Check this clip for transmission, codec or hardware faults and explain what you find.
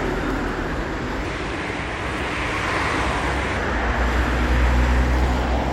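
One fault stands out: a section at the wrong speed. From 1.24 to 3.57 s, playback was likely clocked against the wrong rate, running the audio 1.21 times too fast, so everything in that stretch turns hurried and rises about three semitones before snapping back to normal pitch and pace.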